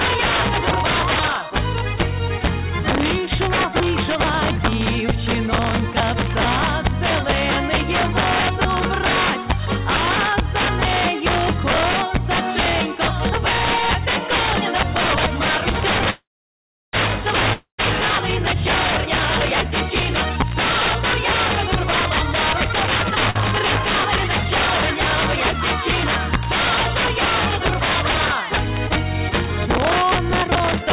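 Integer overflow runs right through the audio: loud peaks pushed about 6 dB past full scale wrap around to the opposite sign instead of being limited, so a few percent of samples flip across the whole range and you get harsh cracks on the loud peaks, far nastier than plain clipping. Everything sits under a ceiling at 4 kHz, which fits a G.711 A-law call path at 64 kbps. From 16.1 to 16.95 s there's a call audio freeze: the last sound smears into a fading buzz, then about 0.71 s of silence, and the audio picks up exactly where it left off, likely because packets got held up and the jitter buffer ran dry. At 17.53 to 17.80 s comes a long network dropout, a short fading tail and then silence, after which about 0.26 s of audio has simply gone missing, likely from packets that never arrived. Jitter buffer speed-up kicks in three times as the receiver trims pitch-period slices to cut the backlog. 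It runs at 121% from 19.70 to 19.91 s (a few tens of ms removed) and at 155% from 22.69 to 23.21 s (roughly a third of a second cut, clearly rushed). The last one is at 113% from 28.65 to 30.87 s, again about a third of a second. Just after the second speed-up, at 23.30 to 23.37 s, a short stall from a late packet holds the sound for about 48 ms with a slight buzzy dip before carrying on with nothing lost.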